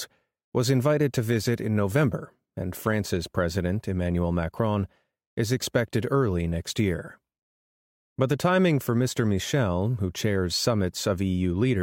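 Nothing wrong can be heard in this speech recording.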